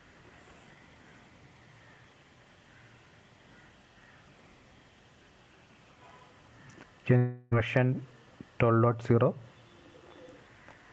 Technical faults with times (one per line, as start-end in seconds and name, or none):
0.00-10.93 gain pumping
7.17-7.53 long network dropout